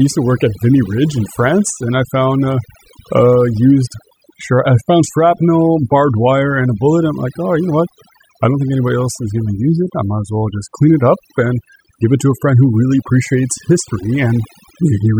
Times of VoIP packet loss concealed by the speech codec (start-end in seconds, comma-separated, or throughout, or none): none